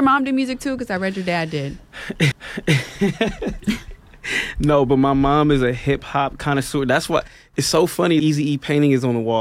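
Speech, with two CD skips at 2.32 s and 8.20 s: each is a tick with a mute of a few milliseconds, then playback resumes elsewhere, unlike a dropout, which continues in place.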